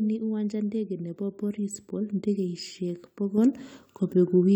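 A sudden gain jump at 3.38 s lifts the speech and background together by about 5 dB to the end, likely a digital gain change applied without a ramp.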